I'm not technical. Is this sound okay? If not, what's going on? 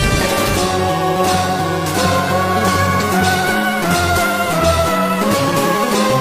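No, there's one hiccup. From 2.98 to 3.03 seconds you get a quick glitch, a brief blip or squawk about a twentieth of a second long. That's damaged data in a compressed stream: a small piece of the stored or streamed file got scrambled or lost, so the player briefly couldn't make sense of it and had to hunt for the next clean chunk before carrying on.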